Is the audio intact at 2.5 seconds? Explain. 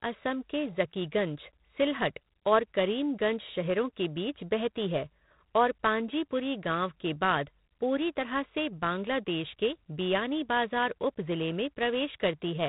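No. At 2.5 seconds, as throughout, G.726 ADPCM coding at 24 kbit/s cuts everything above 4 kHz. Its coarse predicted differences add rasping hiss that rises and falls with the speech, unlike steady background noise.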